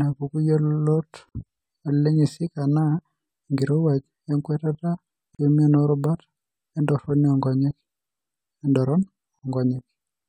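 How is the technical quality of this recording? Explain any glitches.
The speech has a recurring dropout. At 1.29 to 1.35 s, 5.35 to 5.39 s and 9.39 to 9.43 s, a gap at a join of encoded pieces cuts in: separately encoded sections, spaced 4 s apart, were joined with their encoder delay and final-frame padding left in. Each produces a 58 ms or 40 ms silence with smeared edges before the speech resumes where it stopped.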